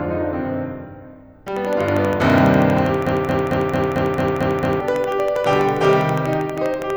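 Something, likely interference from nearby equipment or a faulty connection or power supply, begins injecting pulses into the music at 1.48 s and keeps it up until 6.91 s. This train of clicks runs at a steady 12.4 per second, roughly seventy clicks in all, each much the same shape and peaking around 5 dB above the music. It comes across as an even ticking or popping laid over the top, audible in quieter moments too.

From 3.07 s to 4.81 s the player, encoder or stream has likely stalled and keeps resending the last fragment it held. This broken-record loop repeats a 0.22 s slice of music exactly, back to back, eight times over, so the same short fragment stutters for nearly two seconds while the music that should have played then is lost. The click train continues over the loop throughout.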